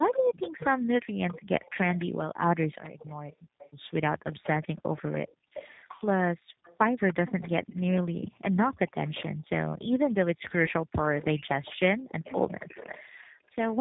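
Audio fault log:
Throughout: tandem speech coding. The speech sounds rough, muffled and warbly, with nothing above 3.8 kHz. Two speech coders were applied one after another, each re-coding the other's damage. The sound fits a narrowband chain ending in a G.729A-type coder.
0.12–13.55 s: echo leak. A faint delayed copy of the speech trails the original by 0.29 s, sitting roughly 15 dB down. This is likely loudspeaker sound that the far end's echo canceller failed to remove fully before sending it back.
3.36–3.58 s and 4.76–6.63 s: background gated by the echo canceller. The room sound drops by about 35 dB and about 36 dB. The first dip is brief, and the second affects about 0.7 s in all. The canceller clamped the microphone while its loudspeaker played, then released it.
8.21–8.29 s and 10.03–10.31 s: speech suppressed in double talk. The talker's voice dips briefly, by about 15 dB at 8.21 s and almost completely at 10.03 s. 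Both sides were likely talking at once, so the canceller could not separate voice from echo and turned both down.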